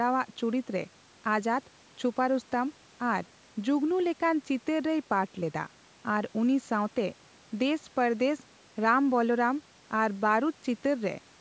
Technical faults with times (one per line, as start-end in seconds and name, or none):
none